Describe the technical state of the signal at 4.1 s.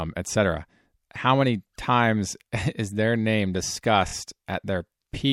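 Right at 4.1 s you're hearing repeated frames, spanning about 4.07 to 4.12 s. A single chunk of the compressed stream got played three times in a row. The length of that chunk points to a 24 ms frame, so two extra plays add 48 ms to the speech. It comes across as a quick stutter, a tiny slice of the speech looping before things carry on, and it nudges everything after it slightly later.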